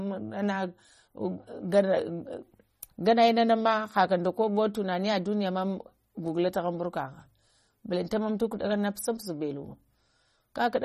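Throughout the speech there is plainly audible codec damage, most likely MP3 compression at a low bitrate, consistent with roughly 32 kbps. The encoder had too few bits, so it dropped weak frequency components frame by frame, giving the sound a watery, swirling texture with chirpy s sounds and softened onsets. A spectrogram would show a hard ceiling with nothing above 15.3 kHz and a speckled pattern of gaps flickering on and off below it.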